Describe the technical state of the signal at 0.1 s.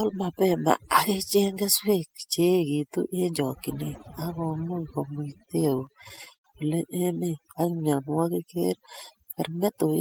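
Overdone noise removal is present at 0.1 s and runs through the entire clip rather than starting or stopping there. An overly aggressive noise reducer is pulling individual frequency bands down or out whenever their level sits close to its noise estimate, so quieter parts of the speech are removed along with the noise. The background drops and breaks up into twinkling, warbling specks.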